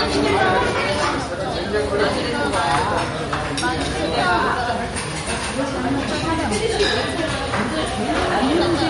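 Throughout the clip, the likely cause is heavy MP3 compression at a rate that fits roughly 48 kbps. Starved of bits, the encoder removes everything above 11.2 kHz and drops weak frequency lines frame by frame, so the sound turns dull, watery and swirly, with smeared attacks.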